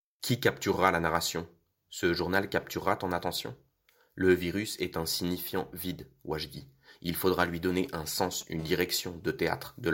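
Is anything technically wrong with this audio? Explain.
Yes. Two kinds of mobile-phone interference appear near the end of this speech clip.

From 7.71 to 8.43 s there are GSM signalling bursts: a nearby 2G handset sends brief radio bursts while signalling, and the audio circuitry rectifies them into galloping ticks and short 217 Hz buzzes, about 20 dB below the speech. A spectrogram shows stacked harmonic combs in clustered vertical blocks.

From 8.59 to 9.70 s a steady GSM phone buzz follows, as the handset is now in a call, pulsing 217 times a second. The rectified pulses give a hard, raspy buzz, about 32 dB below the speech. The spectrogram shows continuous harmonic lines every 217 Hz. The waveform shows a regular pulse train.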